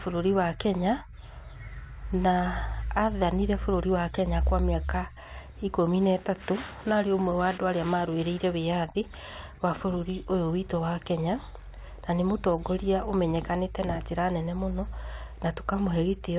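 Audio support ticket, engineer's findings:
No faults found: speech carried over a working G.711 telephone path, band-limited to below 4 kHz, which fits 8,000-sample-per-second A-law coding, with only the faint, level-following quantisation noise of that format.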